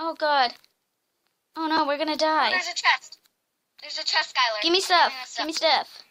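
Nothing stood out as a technical problem on listening to this audio.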